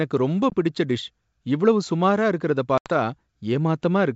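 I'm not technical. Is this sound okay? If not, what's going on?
No. There are two short gaps caused by packet loss on an ADPCM call. Pieces of the signal went missing and were replaced by silence. The first gap is at 0.50 s and lasts about 20 ms. The second comes right after "டிஷ் இவ்வளவு சுமாரா இருக்குறத", at 2.78 s. It lasts about 80 ms. Each gap has sharp edges. After each gap the speech comes back with slight roughness until it settles.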